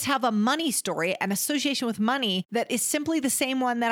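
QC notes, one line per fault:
No faults were heard anywhere in the speech. Nothing in the recording calls for a note at any point.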